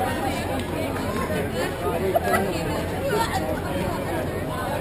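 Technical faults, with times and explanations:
Throughout, imaging from sample-and-hold upsampling: each sample was simply repeated without smoothing, consistent with 24 kHz raised to 48 kHz, leaving mirrored content at 12 to 24 kHz, about 24 dB below the signal, heard as metallic fizz tracking the sound.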